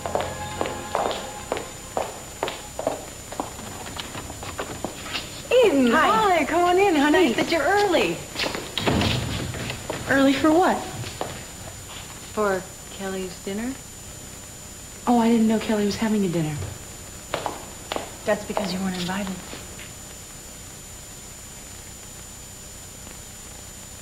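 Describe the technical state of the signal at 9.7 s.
At 9.7 s the signal is intact, with no dropout, click, distortion or other fault at that point.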